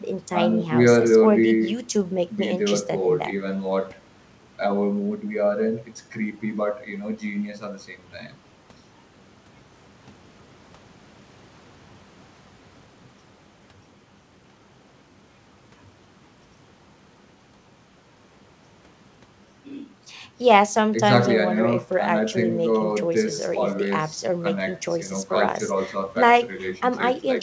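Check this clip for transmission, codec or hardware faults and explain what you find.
No transmission, codec or hardware faults are audible in this speech; it has been through a call path whose band stops at 8 kHz, as expected from a wideband codec such as G.722.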